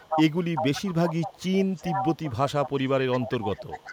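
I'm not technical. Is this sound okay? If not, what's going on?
No. There's an echo leak at 0–0.33, 0.56–1.58, 1.75–2.32, 2.48–2.9 and 3.12–3.93 s. A copy of the voice repeats 0.39 s late. At first it is as loud as the original, then it fades. Likely, a loudspeaker's sound reached the microphone and wasn't removed.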